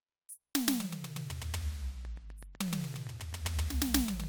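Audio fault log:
2.05–4.25 s train of clicks: steady ticking at 7.8 per second, some twenty alike pops poking above the music, likely from nearby equipment interference or a faulty connection.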